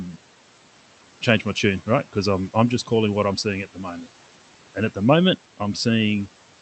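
Throughout the clip there are noise suppressor artifacts. The room noise, about 20 dB under the speech, drops by about 12 dB between phrases and swells back beneath them. A spectrogram shows the noise floor pumping, under an 8 kHz ceiling.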